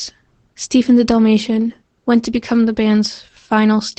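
Opus voice compression runs through the whole speech clip. Nothing is heard above 8.8 kHz, so the band is cut to wideband and the top air is gone. The SILK linear-prediction coder rebuilds the speech from a coarsely coded excitation. The damage is plainly audible. The speech sounds muffled, slightly hoarse and faintly robotic. That level of roughness fits a low bitrate around 12 kbps with 20 ms frames.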